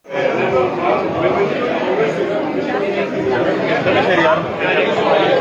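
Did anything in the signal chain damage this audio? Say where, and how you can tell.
No, nothing in the signal chain damaged this audio, so there is no stage to point to.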